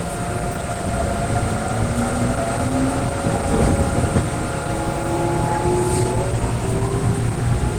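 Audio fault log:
Throughout, Opus compression: tones and textures come across muffled and hoarse rather than swirling, and the damage is plainly audible. This points to a low bitrate near 16 kbps, likely with the encoder in its hybrid mode, filling starved bands with noise.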